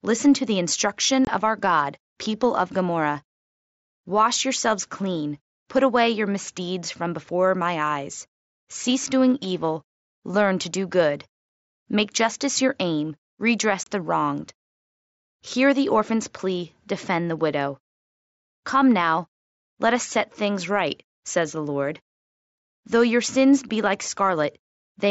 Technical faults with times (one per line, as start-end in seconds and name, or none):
1.25-1.27 unconcealed Bluetooth headset packet loss
13.83-13.87 unconcealed Bluetooth headset packet loss
23.69 unconcealed Bluetooth headset packet loss